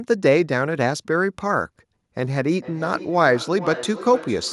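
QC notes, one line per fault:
2.23–4.52 s, feedback echo between two devices. From here to the end, the speech returns at a repeat of roughly half a second, peaking about 14 dB below the direct voice. A second device in the room replays the call. This microphone picks it up again, and its own echo canceller cannot remove it.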